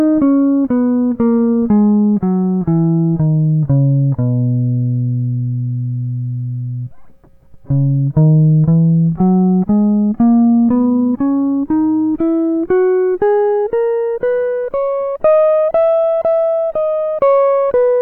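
Listening to this music clip, nothing stood out as a technical fault at any point.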